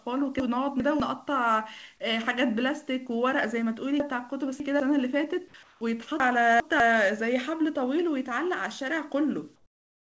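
From 0.4 to 1.0 s the sound jumbles: chunks out of order. The audio runs in 200 ms blocks, and one block plays two positions later than it should. Nothing is missing, which sets this apart from a dropout. The sound is all there but in the wrong sequence, with three hard joins. The same happens from 4.0 to 4.8 s, this time with a block three places late, so the scramble lasts longer. It recurs from 6.2 to 6.8 s, again two places late.

At 5.48 s, about 60 ms of the sound gives way to flat, featureless noise. This is sound dropped by the voice detector, likely because the sender's detector took a quiet stretch for background and stopped transmitting. The receiver filled the gap with comfort noise, and about 50 ms of real sound is gone. That loss is what separates it from the next fault.

From 5.63 to 5.81 s, only the background is swapped, likely comfort noise in place of the background during a pause in transmission. 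The background sits about 32 dB below the loud parts, and the substitute is about 3 dB quieter and lacks its texture. From 9.56 s to the end, the same likely cause gives a longer, smoother stretch, about 10 dB down, against a background about 43 dB below the loud parts.

Throughout, nothing is heard above 8 kHz, as expected from the G.722 call codec.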